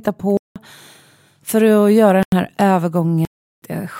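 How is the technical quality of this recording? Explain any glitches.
The recording has three dropouts where the speech cuts to dead silence. At 0.37 to 0.56 s, 2.23 to 2.32 s and 3.25 to 3.62 s there's a block of digital silence, about 186, 93 and 372 ms long. The playback path likely didn't fill its output buffer in time, and the doubling lengths fit whole buffers of 4096 to 16384 samples at 44.1 kHz. Each hole starts and ends abruptly, so the speech cuts out and back in with no fade.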